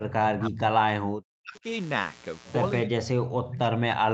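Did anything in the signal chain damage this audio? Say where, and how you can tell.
Yes. A steady, raspy buzz runs under the whole clip: mains buzz at 60 Hz, about 20 dB below the speech. This is an analogue wiring problem. Sharp switching spikes, probably from a dimmer, rectifier or poor shielding, enter twice per mains cycle and produce a dense comb of 60 Hz harmonics.

From the start to 1.65 s, and again from 2.84 s to the end, the speech dips and cuts out in pieces, falling by roughly 40 dB at its deepest. The likely cause is speech suppressed in double talk, at the call processing stage. The echo canceller couldn't separate this talker from loudspeaker echo while both sides spoke, so it attenuated everything.

Between 3.44 and 3.49 s a brief, faint scrap of delayed speech appears, lagging 337 ms and sitting about 15 dB below the direct sound. This is likely an echo leak in call processing: a loudspeaker-side echo canceller failed to remove all of its microphone pickup and sent the residue back.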